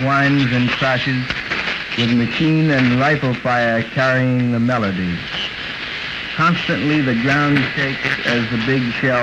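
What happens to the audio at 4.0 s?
Nothing goes wrong at 4.0 s: the audio plays through that moment intact, with no dropout, glitch or other fault to be heard.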